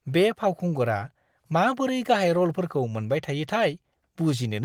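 Speech recording with no technical faults, its faint coding texture consistent with fullband Opus in hybrid mode at a rate that fits 24 kbps.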